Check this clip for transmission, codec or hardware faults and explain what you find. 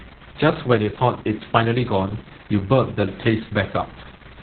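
There's one fault, and it runs the whole clip: Opus voice compression. The speech sounds muffled, hoarse and a bit robotic, with nothing above about 4.3 kHz, which fits a very low-bitrate narrowband SILK mode.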